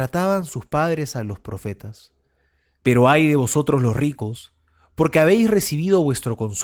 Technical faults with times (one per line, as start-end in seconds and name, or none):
none